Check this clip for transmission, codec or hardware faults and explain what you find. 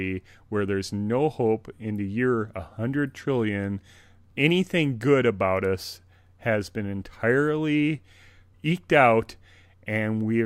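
I found no faults in this clip to explain.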